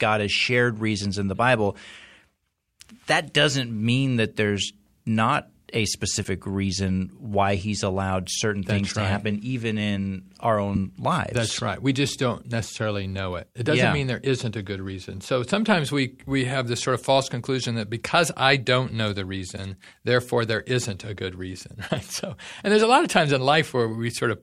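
A broken MP3 bit reservoir is the likely cause here: frames went missing, so the next frame reached back into the bit reservoir for borrowed data and decoded bytes that belonged to a different frame. Speech skips ahead with a short garbled break lasting about one 24 ms frame, at 6.23–6.26 s, between "that there's not a" and "reason why he's allowed", at 10.74–10.77 s, right after "happen even in our", and at 21.88–21.91 s.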